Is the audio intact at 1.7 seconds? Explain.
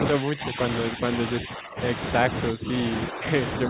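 No, 1.7 s falls inside a dip from 1.45 to 1.79 s: speech suppressed in double talk, likely an echo canceller ducking the talker by roughly 15 dB.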